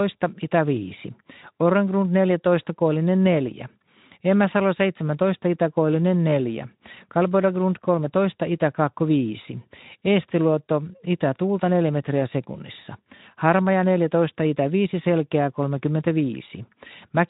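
No faults can be heard anywhere in this speech.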